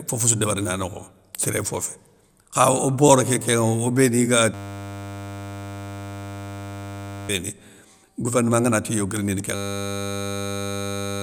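Speech breaks into a steady 100 Hz buzz at 4.54–7.29 s and from 9.55 s to the end: a system hang loop repeating one 10 ms buffer.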